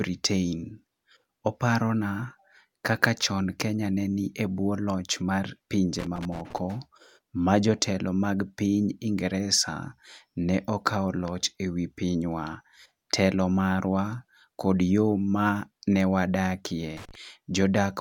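Speech with loose connector crackle in two bursts, from 5.99 to 6.58 s and from 16.97 to 17.15 s. A worn or dirty contact breaks and remakes, chopping the signal and adding pops. The irregular, scratchy clustering distinguishes it from evenly spaced digital clicks.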